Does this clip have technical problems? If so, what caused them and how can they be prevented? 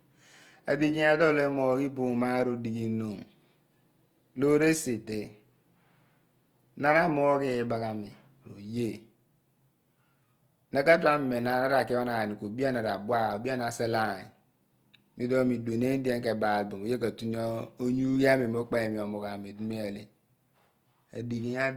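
Yes. Opus compression damage runs through the whole clip. The speech sounds grainy, rough and noisy, though the bandwidth stays full. This likely comes from Opus music mode, and the roughness fits a low bitrate near 24 kbps. Starved bands get filled with noise or folded copies of lower bands. To prevent it, encode at a higher bitrate or in speech mode.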